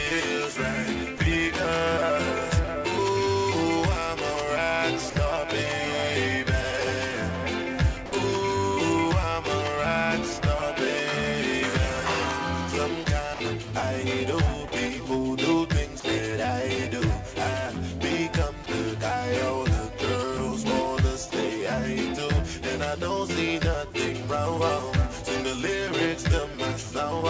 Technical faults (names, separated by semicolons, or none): sound dropped by the voice detector; sound chopped by the voice detector